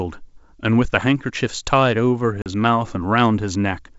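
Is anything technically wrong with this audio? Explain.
Yes, there's one fault: packet loss on an ADPCM call, around 2.42 to 2.47 s. About 40 ms of audio drops out, likely a couple of packets, and the gap is filled with silence, so you hear a hard-edged hole. The decoder's adaptive predictor and step size also lose sync with the sender's, so when the speech resumes it comes back slightly distorted, before settling within some tens of milliseconds. The G.722 wideband coding itself holds up fine.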